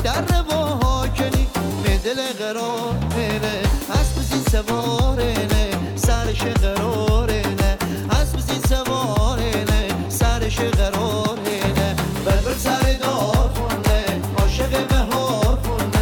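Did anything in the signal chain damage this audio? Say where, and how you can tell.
No, nothing in the signal chain damaged this audio.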